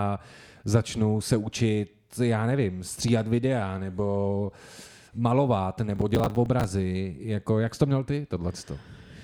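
From 5.96 to 6.64 s the speech tears into processor overload crackle. Over a dozen missed processing deadlines each replay a scrap of stale audio with hard edges, which fits buffers of around 10 ms. A spectrogram shows dense vertical broadband streaks, and the waveform shows jagged discontinuities.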